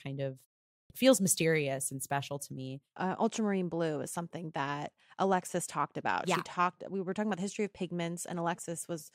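At 0.74 s, after a short pause of about 0.37 s, the speech comes back abruptly with its opening missing: a clipped start after a pause. Roughly 160 ms is swallowed, through 0.9 s, because the output device dozed off in the silence and needed a moment to wake before passing sound again.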